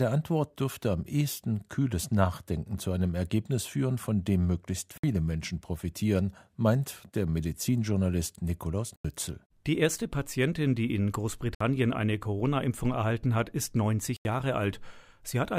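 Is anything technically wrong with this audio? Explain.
Yes. The speech has four blocks of digital silence: at 4.98 s (59 ms), 8.96 s (85 ms), 11.55 s (59 ms) and 14.17 s (85 ms). The output buffer likely went unfilled, which fits a 4096-sample buffer for the longer gaps. Each abrupt cut to silence leaves a short hole.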